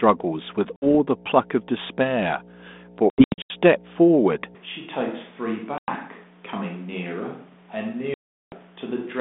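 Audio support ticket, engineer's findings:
Mains hum: steady low tone at 60 Hz for the whole clip, nearly as loud as the speech. Probable ground loop or nearby transformer coupling the power line into the signal; the 200 Hz to 3.6 kHz telephone band fits 32 kbit/s G.726.

Packet loss on an ADPCM call: hard-edged silent holes at 0.76–0.87 s (60 ms lost), 3.1–3.54 s (scattered, 280 ms lost over 400 ms, longest gap 80 ms), 5.78–5.91 s (100 ms) and 8.14–8.55 s (380 ms). Speech returns slightly distorted, settling within tens of milliseconds. Lost packets desynchronise the decoder's adaptive predictor and step size.

Switch to a distant microphone: from 4.55 s to the end, the sound turns abruptly roomy and hollow, loses bass and drops about 10 dB, with room noise rising to roughly 30 dB below the speech. Likely cause: the close mic dropped out and a farther mic took over.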